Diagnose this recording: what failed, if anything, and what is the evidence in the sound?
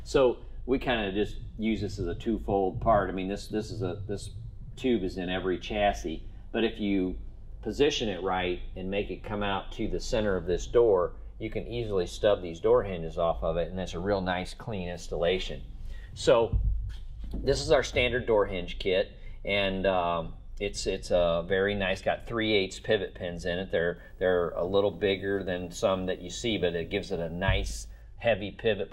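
Video or display buzz got into the analogue wiring from 23.96 to 28.02 s: a buzz at the 59.94 Hz field rate with hash above it, plus a faint 15.7 kHz line-rate whine. A screen or video cable is coupling its scanning signals into the audio, sitting roughly 40 dB below the programme.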